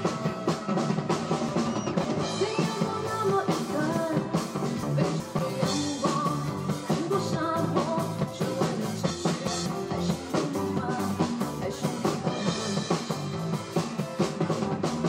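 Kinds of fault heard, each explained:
Chunks out of order: blocks of about 186 ms play after blocks meant to follow them. Nothing is lost, but the sound jumbles at the hard joins. One block lands three places late near 1.49 s, others two late near 4.83 s and 9.10 s.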